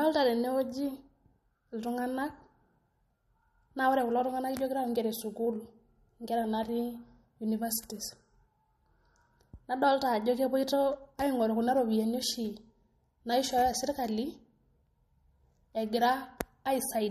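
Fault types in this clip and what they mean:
MP3 compression: The speech has a plainly audible watery, swirling quality with metallic, chirpy s sounds and nothing above 13.9 kHz, which points to MP3 encoding at a low bitrate, likely around 46 kbps. Short of bits, the encoder cuts off the treble and zeroes weak frequency lines that flicker on and off from frame to frame. On a spectrogram this shows as a flat, empty shelf above 13.9 kHz and patchy, speckled gaps in the upper bands.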